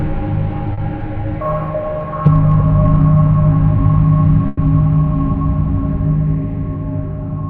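Short concealed packet loss, at 0.73 to 0.79 s: about 40 ms of the stream never reached the decoder in time, and the receiver covered the hole by extending the preceding sound before blending back into the real signal. The patch is brief enough to pass as a small smear or wobble in the audio, but those 40 ms of original material are gone.

Burst of packet loss, at 4.47 to 4.59 s: a longer run of data, about 100 ms, was lost or arrived too late to play. Rather than dropping to silence, the receiver kept synthesising a continuation of the last sound and let it fade as the gap went on, producing a held buzz or dying hiss. When playback picks up again it has skipped ahead, leaving those 100 ms of the real audio missing.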